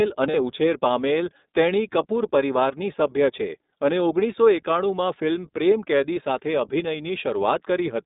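From the start and throughout, the speech carries the sound of the iLBC codec, a narrowband VoIP coder that rebuilds each short frame's excitation independently of the one before. The damage is plainly audible: the speech is clear but rough and slightly synthetic. On a spectrogram the energy sits between about 200 Hz and 3.7 kHz, with nothing above that ceiling. The character fits a rate near 15.2 kbps with 20 ms frames.

At 0.30 to 0.36 s, about 40 ms of lost iLBC frames occur, which points to two consecutive 20 ms packets missing. The decoder fills the hole by repeating the last pitch cycle blended with noise, so the gap comes across as a brief held, buzzy, breathy vowel. In the waveform this appears as a short run of near-identical periodic cycles. On the spectrogram it shows as flat, unchanging harmonic stripes with added noise. Because each frame decodes independently, the voice is right again almost at once.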